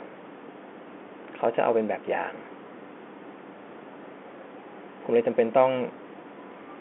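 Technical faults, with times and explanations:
No technical faults can be heard anywhere in the speech.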